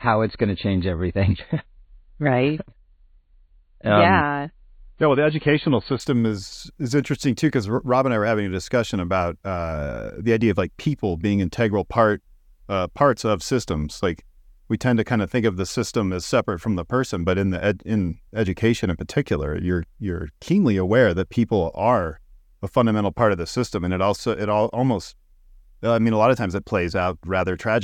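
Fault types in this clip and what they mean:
Adaptive stream starting at a low bitrate: The speech opens dull and band-limited, with nothing above about 4.5 kHz and stronger codec artefacts. This lasts from the start to 6.0 s. At that point the treble returns at once, with no gap or dropout. The player began on a cheap version of the stream so playback could start quickly. It stepped up once the connection was measured. The sound fits a jump from roughly 24 to 128 kbit/s MP3.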